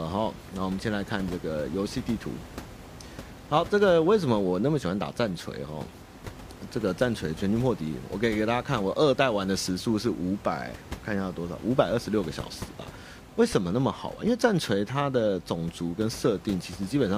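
Nothing in the signal path of this speech recording is at fault, and the background noise of the room, sitting about 17 dB below the speech, is simply part of the captured acoustic environment.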